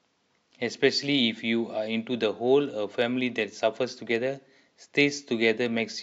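No technical faults occur anywhere in the recording.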